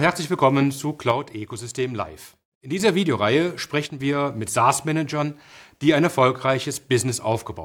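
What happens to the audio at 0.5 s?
Nothing goes wrong at 0.5 s; the speech carries on intact through that moment.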